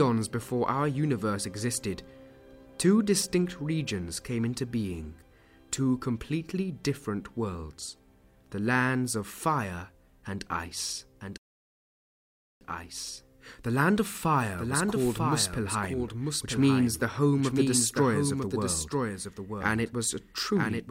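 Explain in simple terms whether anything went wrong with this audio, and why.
Two things went wrong. The audio was likely picked up a second time through a slower path, creating a doubled audio track: from 11.21 s to the end, a quieter copy trails about a second behind.

There was also a rebuffering stall: the player ran out of downloaded audio at 11.38 s and went silent until 12.61 s, then resumed exactly where it stopped, adding about 1.2 seconds.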